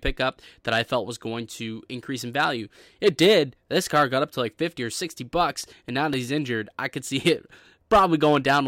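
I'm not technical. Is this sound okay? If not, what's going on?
No, there are CD scratch ticks. Between about 5.64 and 6.38 seconds you'll hear four quick, evenly spaced clicks, the longest only a couple of milliseconds long. A scratch on the disc corrupts a bit of audio each time it spins past, and the player patches over it.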